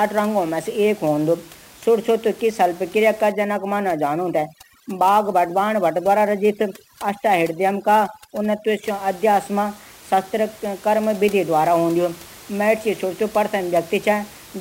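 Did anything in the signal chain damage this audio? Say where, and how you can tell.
Yes. A hiss-like roughness rides on the speech for the whole clip, swelling on loud, bright syllables and vanishing in pauses. This is sample clock jitter at the converter. A clock wandering by around ten microseconds misplaces samples, leaving error roughly 25 dB below the signal.

From 3.32 to 8.84 s, just after "की शल्यक्रिया का", the background collapses to near silence with twinkling specks, though elsewhere the room noise sits about 23 dB under the speech. This is overdone noise removal in call processing, which cuts bands near its noise estimate and strips quiet speech detail with them.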